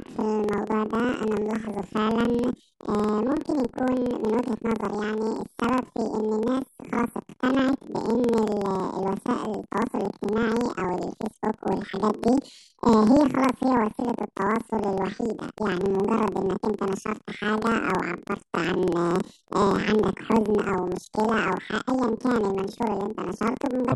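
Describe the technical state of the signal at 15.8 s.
At 15.8 s the speech sounds an octave high with a fast flutter, about 21.5 times a second, as it does throughout the clip. This is planar audio read as interleaved. Each 46 ms block, which fits a 2048-sample layout, plays twice at double speed, left channel then right.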